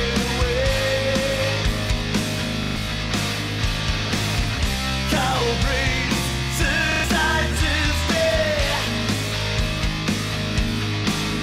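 At 2.64 to 2.76 s and again at 6.92 to 7.04 s, a repeated buffer stutters: one 40 ms slice plays three extra times, so about a tenth of a second of audio is lost. The waveform shows identical blocks with hard joins. At 6.07 to 6.14 s and 7.50 to 7.54 s, a corrupt frame decoded produces brief glitches that peak near -10 and -15 dBFS. On a spectrogram these appear as misplaced bright patches lasting a few frames.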